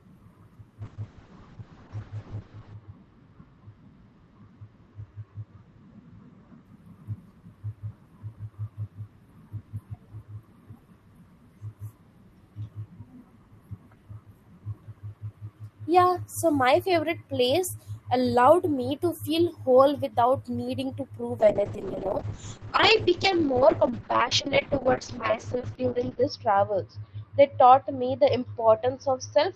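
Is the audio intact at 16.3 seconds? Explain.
Yes, the speech at 16.3 seconds plays through cleanly, with no dropout, click, distortion or other fault at that moment.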